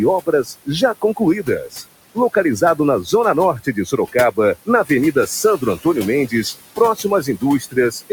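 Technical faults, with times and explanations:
Throughout, noise suppressor artifacts. The suppressor turns down each band it judges to be steady noise, frame by frame. The room noise, about 15 dB below the speech, sinks by about 18 dB in pauses. It then swells back under the talking.
0.21–1.84 s, 2.15–3.13 s, 3.6–5.86 s and 6.77–8.11 s, speech cut by the noise suppressor. Quiet parts of the speech are mistaken for noise and pulled down, by up to about 19, 12, 20 and 18 dB. Some sounds come out swallowed or faint.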